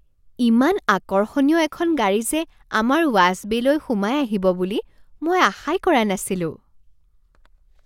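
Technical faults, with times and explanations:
No technical faults heard.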